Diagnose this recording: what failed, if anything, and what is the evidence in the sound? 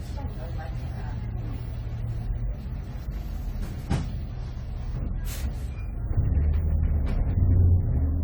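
The codec stage failed: generation loss runs throughout these sounds, with swirly, hollow texture and blurred attacks. It is likely the result of about seven successive AAC-LC encodes near 64 kbit/s. Unlike a single low-bitrate pass, bandwidth stays full, but requantisation on shifting frame grids compounds smearing.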